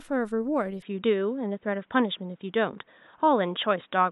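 An input switched to a poorer device at 0.82 s, most likely, and stays through the end. With no gap at the changeover, the speech turns dull and boxy, losing everything above 3.8 kHz, shifting by roughly 5 dB, and gaining a faint new background noise.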